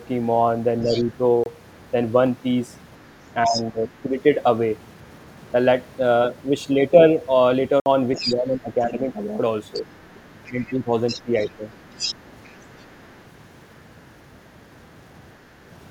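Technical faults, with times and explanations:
0.81–1.14 s, 3.44–3.63 s, 8.15–8.36 s and 9.73–13.19 s, other side's voice leaking through: the echo canceller likely failed to fully remove the far end's loudspeaker sound from the microphone, so a second voice sits under the main speech. It is roughly 15 dB down in the first and last stretches, about 10 dB down at 3.4 s, and only about 5 dB down near 8.2 s, where it is most obvious. The longest stretch runs over three seconds.
0.86–0.95 s, 3.46–4.09 s, 8.24–9.01 s and 10.5–11.59 s, speech suppressed in double talk: with both sides talking at once, the echo canceller likely could not tell the near talker from the echo and pulled the level down on both. The main voice dips while the leaked voice is present. The dip is slight at first, about 5 dB, and deepest around 3.5–4.1 s at roughly 15 dB. The later two dips are about 10 dB, spread over several hundred milliseconds each.
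1.44–1.46 s and 7.80–7.86 s, block of digital silence: likely the output buffer was not filled in time, so samples were replaced by zeros. The sound drops straight to nothing and returns with no fade. The first gap is about 24 ms. The second is 60 ms long and is a clearly audible hole in the audio.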